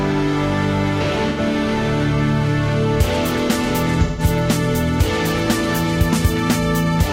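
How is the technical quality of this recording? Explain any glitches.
The recording has two dropouts caused by AAC frame loss with concealment, at 1.29 to 1.40 s (about 85 ms, consistent with two lost frames) and 4.06 to 4.22 s (128 ms, roughly three frames). The decoder patched each gap from the last good spectrum, so each gap sounds like a brief smeared, noisy, phasey blur instead of silence.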